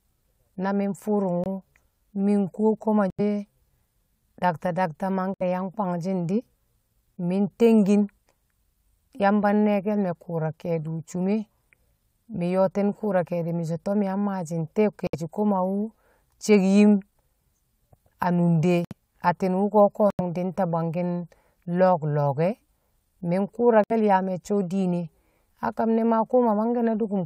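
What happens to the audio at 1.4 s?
At about 1.44 s the speech drops into a short, hard-edged silence that lasts until about 1.46 s, roughly 26 ms. This is a corrupt frame muted fault: bit errors damaged compressed frames, the decoder rejected them, and the player substituted silence. The gap's length points to two frames of about 13 ms each. The sound cuts out abruptly rather than fading, and the speech resumes on schedule with no shift in timing afterwards.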